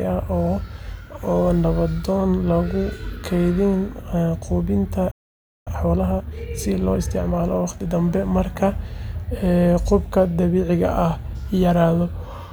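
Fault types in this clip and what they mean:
Playback stall: The speech stops dead at 5.11 s and stays silent for about 0.55 s, until 5.68 s. It then resumes. The likely cause is the player running short of data or its thread being held up, so output halted until it recovered.
Time-compressed catch-up: From 5.68 s to 7.88 s the speech runs hurried, at 1.25 times normal speed, with its pitch unchanged. The player is clearing its backlog by cutting small pieces and cross-fading them. The hurrying begins with "dambe marka".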